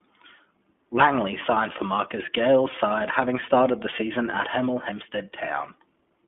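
The whole thing runs through the iLBC codec, narrowband with nothing above about 3.4 kHz, plainly rough and synthetic, which fits its 15.2 kbps mode. Then come lost iLBC frames: at 2.26 s, just after "signed for", and at 4.30 s, after "having started the season", roughly 20 ms each goes buzzy while the decoder repeats the last pitch cycle, then snaps straight back.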